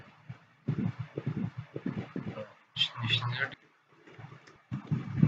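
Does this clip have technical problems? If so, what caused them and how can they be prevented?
Yes. From 0.87 to 2.42 s a doubled audio track is heard. A full-band copy, about as loud as the original, trails it by roughly half a second, with no decay or room colour. It likely comes from a second, slower capture path or a misaligned edit. Prevent it by routing only one capture path into the mix.

Compressed frames are skipped at 2.16, 3.54 and 4.56 s. The sound jumps ahead by roughly 300 ms, 400 ms and 100 ms. The short jump fits whole 32 ms frames being dropped. Prevent it by checking files for damaged or missing frames before playback.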